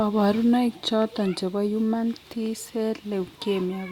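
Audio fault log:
Nothing's wrong here; the speech comes through without a single glitch or dropout to flag.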